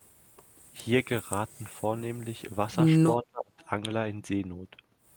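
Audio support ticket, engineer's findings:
Speech suppressed in double talk, 3.23 to 3.62 s. Level falls away hard, deepest dip around 30 dB, about a third of a second of speech lost or chopped. Likely the echo canceller's suppressor: both ends talking at once, it can't tell near-end speech from loudspeaker echo, so it clamps down on everything.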